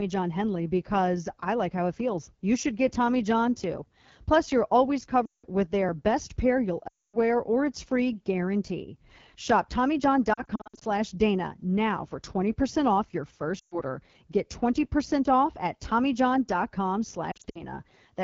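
Speech coded with the AMR wideband (HD Voice) codec at 8.85 kbit/s, one of its two lowest rates, so the voice sounds plainly rough and raspy throughout. Lost AMR speech frames cause gaps at 5.26 s (180 ms missing), 6.87 s (260 ms), 10.33 s (240 ms scattered over 0.48 s, longest run 60 ms), 13.59 s (120 ms) and 17.31 s (140 ms scattered over 0.24 s, longest run 60 ms). The decoder repeats the last good parameters with falling gain, so each run drops to near silence within two frames and comes back weak or rough for a moment.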